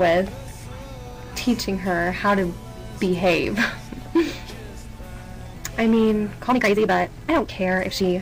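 From 6.46 s to the end at 8.21 s, the audio runs about 1.7 times faster while its pitch holds steady, a time-stretched section. It was likely squeezed in software to fit a set length, with short slices dropped and the remainder spliced together. The pace lurches forward and sounds rushed. On a spectrogram, the frequency bands stay at the same heights while events crowd closer in time.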